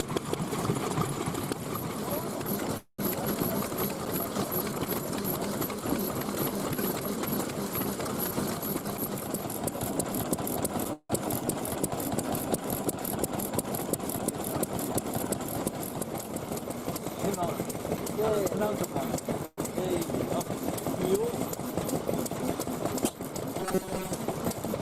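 The audio has three kinds of fault. A call audio freeze occurs at 2.77–3.01 s, 10.93–11.12 s and 19.46–19.60 s. Each time the last sound trails off as a fading fill, reaching silence for about 110, 50 and 20 ms. The audio then resumes where it stopped, so nothing is lost and the delay grows by 211, 165 and 120 ms. Late packets likely emptied the jitter buffer. A jitter buffer speed-up follows backlogs at 8.79–10.69 s, 17.57–18.03 s and 18.50–19.39 s. Playback runs at 110, 109 and 106 percent with unchanged pitch, so the sound feels hurried. Short pitch-period slices are cut repeatedly, about a fifth of a second in the first stretch and less in the later two. Robotic sound from repeated short buffers occurs at 23.60–24.12 s. Most of that stretch is a rigid metallic buzz at 188 Hz, which fits a tiny block of about 5.3 ms being replayed. The likely cause is audio arriving too seldom, with the gaps filled by repeats.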